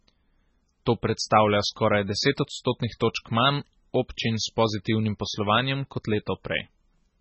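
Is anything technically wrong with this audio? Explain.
Yes. Throughout the speech there is severe MP3 compression, likely from a very low-bitrate encode; the damage level fits something around 16 kbps. Nothing is present above 8 kHz, where the encoder has cut the treble outright. It has also zeroed weak frequency lines that then switch on and off from frame to frame, giving a watery, swirling texture. Sibilants turn metallic and chirpy, and consonant attacks sound smeared.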